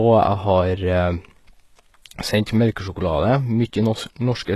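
From start to finish the speech carries plainly audible codec damage, most likely HE-AAC compression at a low rate, something around 16 kbps by the sound of it. Nothing at all comes through above about 12.3 kHz, and the treble below that cutoff is rebuilt from copies of lower bands rather than coded properly, so its harmonics don't sit right against the lower range. S sounds come out gritty and metallic or lispy.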